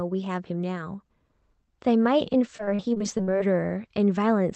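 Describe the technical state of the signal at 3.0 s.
At 3.0 s the speech sits inside a burst of repeated packet loss (robotic sound), from 2.57 to 3.42 s. Ten gaps, none longer than 38 ms, are patched by extending the preceding sound. About 22% of the stretch is concealed, giving a choppy stutter with pieces missing. A single dropout would leave one isolated hole instead.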